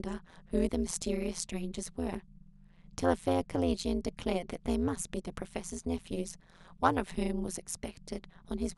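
A harsh, metallic buzz runs through the whole speech clip, from start to finish. It comes from overlap-add ripple, where frames recombine without constant gain, so the level dips by about 60 dB at roughly 150 Hz.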